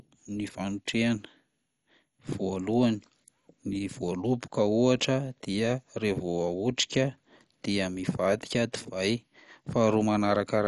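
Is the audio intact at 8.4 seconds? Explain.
No. At 8.4 seconds the speech carries MP2 compression damage present throughout the clip, likely from a low-rate encode near 48 kbps. Nothing survives above about 11.3 kHz, so it sounds dull, and starved sub-bands switching on and off leave a gurgling, granular distortion.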